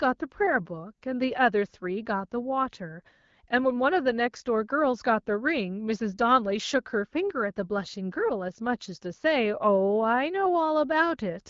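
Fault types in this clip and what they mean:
No fault types are present in this clip.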